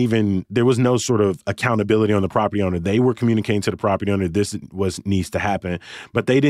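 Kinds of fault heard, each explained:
No technical fault can be heard in this speech recording. There is nothing to list under any kind of fault.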